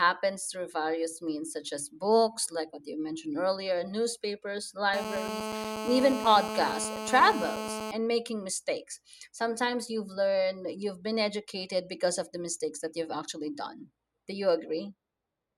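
From 4.94 to 7.91 s a hard, raspy buzz cuts across the speech, pitched at about 217 Hz and thick with harmonics, sitting only about 6 dB below the talker and holding steady for its whole three seconds. This is GSM phone buzz: a 2G handset nearby, in a call, was sending radio bursts 217 times a second, and the audio circuitry rectified those pulses into an audible tone that has nothing to do with the recorded sound.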